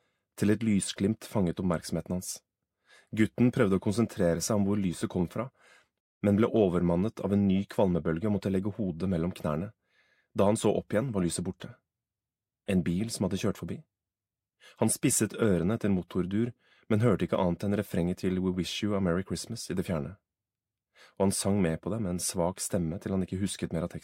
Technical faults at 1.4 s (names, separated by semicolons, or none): none